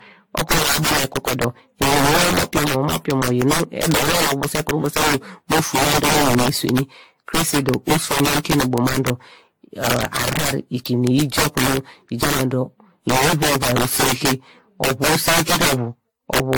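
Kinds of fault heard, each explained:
Integer overflow: Speech peaks are driven about 12 dB past full scale, and instead of being held at the limit, each peak wraps around to the opposite extreme. Roughly one sample in twenty goes over throughout the clip, so loud peaks produce violent cracks. These cracks are much harsher and more abrupt than clipping, because clipping flattens a peak while overflow throws it across the whole range.
Generation loss: The speech sounds swirly, hollow and smeared throughout, with blurred consonant attacks and nothing above 19 kHz. The damage is worse than a single encode at a bitrate around 96 kbit/s would explain. The likely cause is about ten rounds of AAC-LC decoding and re-encoding. Each pass requantises on a shifted frame grid, so noise and spectral holes pile up. That buildup is what separates it from a single low-bitrate encode.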